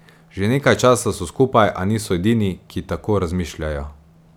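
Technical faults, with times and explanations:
No technical faults can be heard in this speech recording; the signal stays intact and continuous the whole way.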